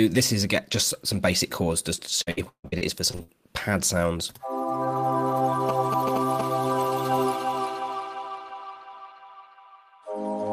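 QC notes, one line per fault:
1.95–3.30 s, repeated packet loss (robotic sound): nine gaps in quick succession, the longest 150 ms, each patched by stretching the preceding sound, so about 35% of the span is concealment. It sounds choppy; the waveform shows repeated, near-identical cycles where audio dropped out.
5.69–6.41 s, GSM signalling bursts: a nearby 2G phone's short radio bursts rectified by the audio circuit, giving a galloping ticking buzz at about 217 Hz, only about 5 dB below the signal. The spectrogram shows vertical stripes in galloping groups with harmonic lines.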